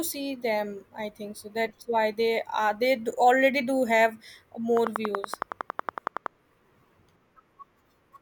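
Right after "do already do have", from 4.77 to 6.27 s, a train of clicks ticks regularly at about 10.7 per second, roughly fifteen sharp pops standing well above the speech, likely interference or a faulty connection or power supply.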